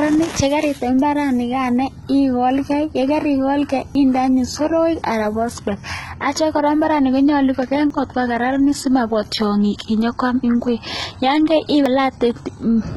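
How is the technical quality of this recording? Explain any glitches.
The recording is technically compromised: the speech is heavily coded throughout, and three brief skips interrupt it at regular intervals.

HE-AAC compression, throughout: the treble is likely rebuilt by spectral band replication, so upper harmonics don't line up with the coded lower band. S sounds come out gritty and metallic, nothing survives above 11.8 kHz, and the heavy damage fits a very low bitrate near 16 kbps.

Audio missing between chunks, at 3.95, 7.90 and 11.86 s: a small slice, roughly 50 ms, drops out each time and the two sides butt together with no silence. The 4-second spacing points to a chunked recorder or processor, likely losing audio at each chunk boundary. The skip at 7.90 s falls just after "kora mbaret ne konyolu".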